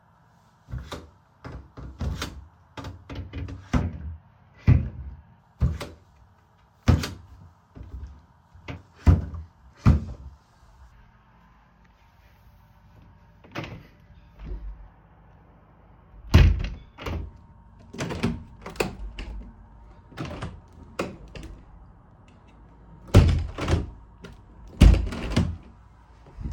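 No technical faults can be heard anywhere in this recording of sounds.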